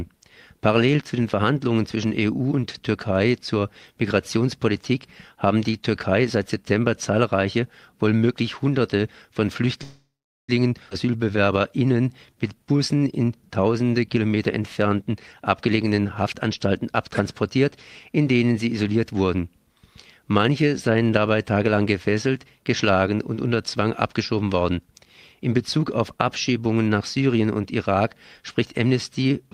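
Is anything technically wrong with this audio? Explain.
Yes. The audio has four kinds of timing fault, all from the receive side of a call.

From 9.83 to 10.50 s there is a call audio freeze. The sound stops moving forward for about 0.65 s. The last sound is carried on briefly, then fades, and about 0.44 s of that is silence. When the audio resumes, it picks up exactly where it stopped. Nothing is lost. A gap has simply been inserted. This is likely packets stalling in transit until the jitter buffer ran dry.

At 10.90 s there is a skip ahead. Roughly 0.2 s of sound is missing. The two sides are joined almost directly, with only a tiny bridge of a few milliseconds. Playback lurches forward. This fits a stretch of audio being dropped while later audio was already queued. It also takes back some of the delay the freeze had added.

From 11.06 to 13.05 s there is a jitter buffer slow-down. 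The sound plays at about 89% speed, but the pitch is unchanged. Sounds are drawn out. The receiver repeated single pitch periods or bits of pause, over and over. Those repeats add about 0.23 s in total. This rebuilds a reserve in a buffer that had run low.

There are three stretches of jitter buffer speed-up. The first runs from 15.02 to 16.68 s at about 108% speed. The second runs from 17.08 to 17.65 s at about 107%. The third runs from 24.43 to 25.41 s at about 109%. In each one the sound feels hurried while the pitch holds steady. The receiver cut many short pitch-period slices to trim excess buffered delay. That removes roughly 0.15 s, 0.05 s and 0.1 s respectively.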